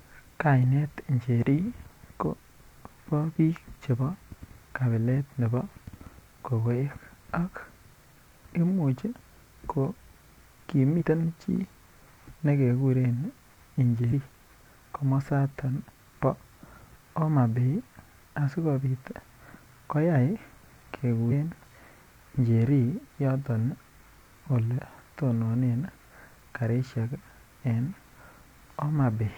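At about 10.96 to 11.03 s, 12.31 to 12.36 s, 14.08 to 14.12 s and 21.27 to 21.32 s the speech jumps forward. These are compressed frames skipped: whole frames never got decoded, so the audio leaps ahead in steps of the 46.4 ms frame length. That's roughly two, one, three and two frames, or around 100, 50, 150 and 100 ms lost.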